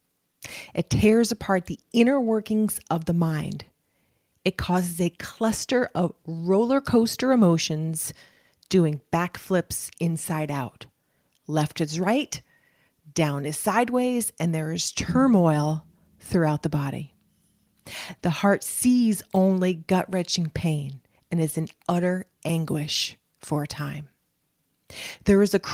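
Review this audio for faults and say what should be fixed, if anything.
No faults heard; nothing needs fixing.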